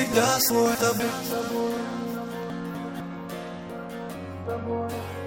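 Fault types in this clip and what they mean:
Chunks out of order: a 250 ms block lands one slot late and plays after the block meant to follow it. Nothing's lost, but at 0.5 to 1.0 s and 2.5 to 3.0 s you hear a short jumbled bit.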